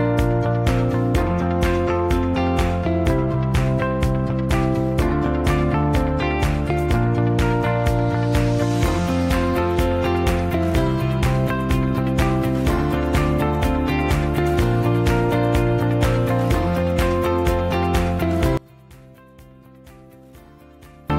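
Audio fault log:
18.57 to 21.10 s, one channel inverted: the sound suddenly falls by about 26 dB and turns faint. The likely cause is reversed polarity on one stereo channel, so the centred content cancels in a mono sum, leaving only the channel difference.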